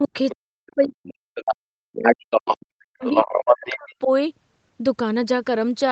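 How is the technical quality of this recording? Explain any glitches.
The quality is poor. The talker keeps dropping out, and a second voice intrudes several times. The audio tops out near 8 kHz, consistent with a low-bitrate wideband call codec.

Speech suppressed in double talk, from 0.0 to 1.21 s and from 1.71 to 4.09 s. The talker's level falls steeply, by about 40 dB at worst. The voice thins and breaks into fragments. Both sides were likely talking at once, and the echo canceller turned down both the talker and the loudspeaker echo.

The other side's voice leaks through at 0.29 to 0.36 s, 1.35 to 1.56 s, 2.04 to 2.57 s and 3.02 to 3.95 s. It starts well below the talker, then grows to nearly equal loudness. The likely cause is loudspeaker echo the canceller failed to remove.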